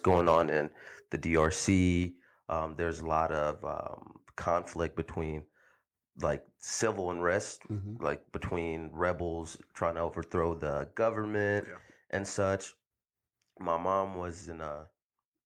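Microphone overload from 0.07 to 0.41 s, just before "in the", and again from 1.36 to 1.71 s, right after "in the": peaks push about 4 dB and then about 2 dB past the converter's limit. The likely cause is input gain set too high. The flattened tops give loud syllables a harsh crackle, worse in the first stretch where a few percent of samples clip. A microphone volume step-down at 1.02 s and again at 2.04 s, just before "um there's a lot", drops voice and background together by about 3 dB each time, most likely the call software cutting input gain after the distorted peaks.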